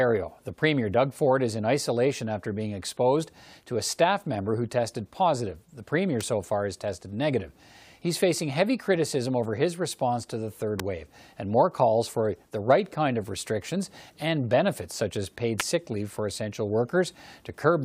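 Speech carries three sharp snaps laid over it: at 6.21 s just before "so far has tested", at 10.80 s between "response to the third" and "wave and more calls", and at 15.60 s between "benefits such as paid" and "sick leave for essential". Each is a brief, hard click peaking roughly around -10 to -15 dBFS. The sound points to an electrical switching spike, likely a nearby switch, motor or static discharge arcing and coupling into the audio line.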